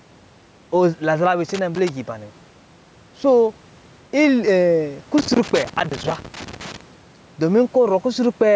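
Throughout the speech, the level breathes, with a swing of about 5 dB. This is gain pumping, likely from input gain set too high and a fast compressor or limiter clamping down on every peak and then releasing. Loud and quiet passages sit closer together than they should, giving a squashed sound.

From 1.49 to 1.89 s, just before "giba nɛ", an irregular burst of scratchy crackle cuts into the signal. This is loose connector crackle: a worn or dirty contact making and breaking as it shifts, chopping the audio into rapid dropouts. A second, longer episode runs from 5.18 to 6.81 s with the same ragged, intermittent scratching, which points to the connection being disturbed again rather than to any steady noise source.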